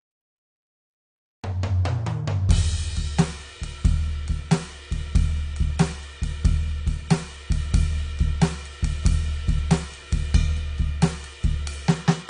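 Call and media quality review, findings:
Music dull and smeared throughout, no content above 10 kHz, fizzy warble on sustained tones; likely AAC compression, low-bitrate lowpass and coarse quantisation, consistent with roughly 32 kbps.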